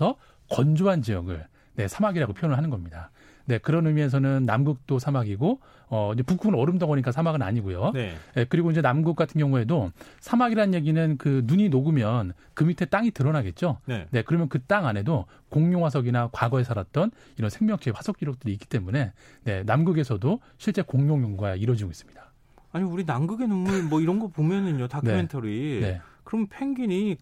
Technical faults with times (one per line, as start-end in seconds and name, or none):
none